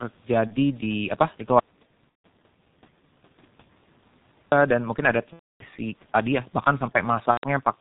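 All the way through, this speech has the G.723.1 codec's heavy stamp: at around 6.3 kbit/s nothing survives above 4 kHz, and the slow-updating voice model leaves it muffled and hoarse, with consonants smeared together. On top of that there's VoIP packet loss concealed by the speech codec, at 0.47 to 0.56 s, 2.09 to 2.26 s, 5.34 to 5.65 s and 7.31 to 7.44 s. The decoder keeps extending its last pitch and filter while fading the gain, so you hear a buzzy or noisy smear that dies away. The gaps run about 30, 150, 270 and 120 ms, which fits whole 30 ms frames going missing. The audio stays weak for a moment after each one.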